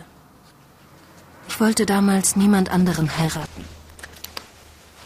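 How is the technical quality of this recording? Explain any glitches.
Quality degrades in the last part of the recording. A call bitrate drop starts at 2.8 s and lasts to the end. The encoder's bit budget collapses, which fits a fall from around 96 to 12 kbps. Coarser coding and lost highs make the sound muffled and watery, worst for about 1.1 s.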